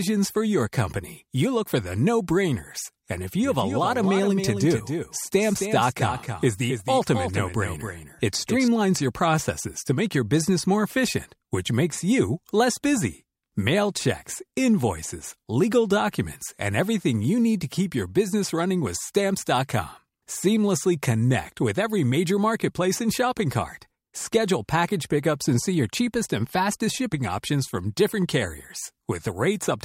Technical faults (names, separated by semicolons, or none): doubled audio track